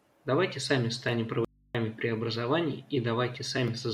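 A short speech clip with one audio dropout to a faint residue. Right after "сами станем", at 1.45 s, the voice cuts out abruptly and stays gone until 1.75 s, so about 0.3 s is lost. The gap isn't silent but holds a low mains hum roughly 35 dB under the speech. That points to the source likely disconnecting briefly while the input stayed open and live.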